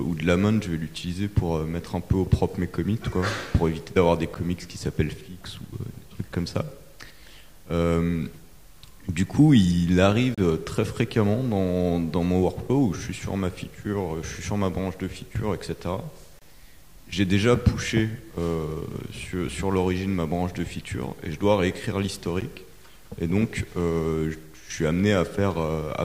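The audio is broken by short, hard-edged silent holes from a gap between stream segments at 4.34 s (11 ms), 10.35–10.38 s (30 ms), 16.39–16.42 s (26 ms) and 22.41 s (12 ms). Their spacing of about 6 s fits 6-second segments whose timestamps leave small gaps that the player pads with silence, without losing any audio. Separately, a single sharp click at 22.25 s is likely caused by dropped samples, with only a couple of samples missing, so the waveform jumps abruptly.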